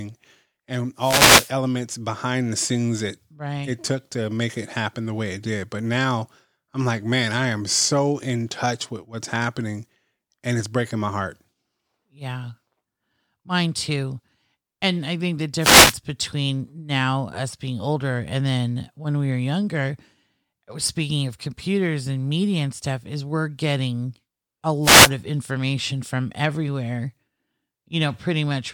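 Wireless microphone noise hits land at 0.97 to 1.53 s, just before "behind the scenes that", at 15.58 to 15.98 s, between "I think the" and "between now us being", and at 24.82 to 25.11 s, just ahead of "of information from everywhere". Each time the FM radio link fades as reflected signals cancel the direct one, the receiver's own noise surges up, and a brief swish of static lasts roughly a quarter to half a second.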